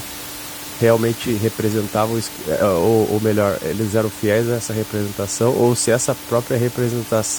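No technical faults are present.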